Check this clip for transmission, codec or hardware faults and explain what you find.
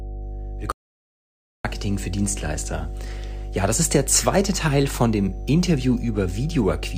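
Two faults are present in this speech clip: a continuous mains hum and one audio dropout to silence.

Mains hum runs from start to finish as a steady low tone at 50 Hz, fairly prominent at roughly 10 dB below the speech. Power-line current leaks into the signal path through a ground loop or a nearby transformer, so the tone never changes with the talking. Its fixed 50 Hz pitch and unvarying level set it apart from a low-frequency rumble or handling noise, both of which drift and fluctuate.

An audio dropout to silence cuts the speech off at 0.72 s and brings it back at 1.65 s, removing about 0.93 s. During that stretch the output is silent: the room tone disappears, then resumes abruptly with the speech. The likely cause is a brief loss of the input, such as a disconnected device or a momentary mute, while recording carried on. Because the room tone vanishes along with everything else, this is not a natural pause or the work of a noise gate.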